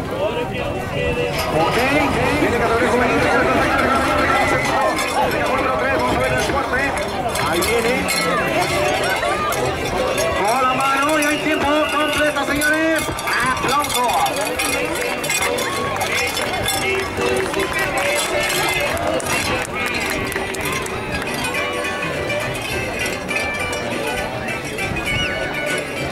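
From 1.52 to 4.56 s, a dry, full-band echo trails the sound by about 400 ms, some 5 dB quieter: a doubled audio track, likely a second copy captured late.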